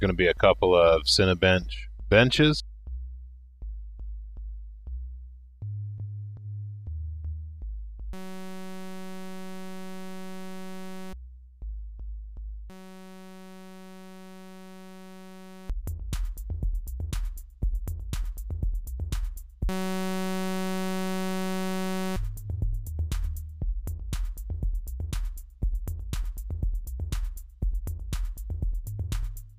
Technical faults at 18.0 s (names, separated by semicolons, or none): none